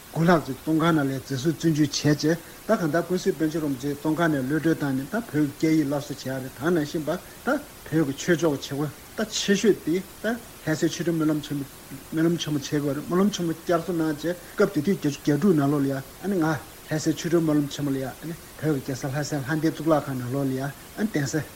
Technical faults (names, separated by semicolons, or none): dropped buffer (overrun)